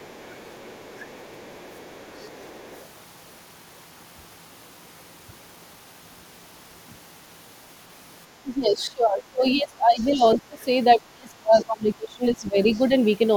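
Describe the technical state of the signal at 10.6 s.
Right at 10.6 s you're catching the tail of speech suppressed in double talk, running from 10.39 to 10.59 s. The speech ducks hard, roughly 20 dB down, for about a fifth of a second, most likely an echo canceller clamping down while both ends talked at once.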